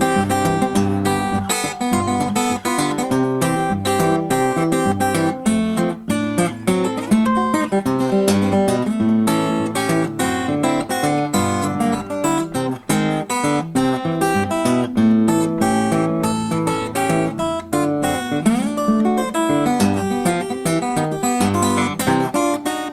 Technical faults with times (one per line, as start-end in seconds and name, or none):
none